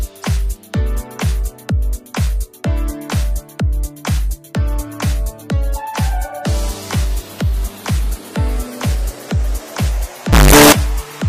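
From 10.33 to 10.72 s the audio turns into violently loud, harsh distortion, likely from signed and unsigned mixed up in 16-bit samples; the waveform leaps rail to rail at each zero crossing, and the spectrogram fills with broadband energy.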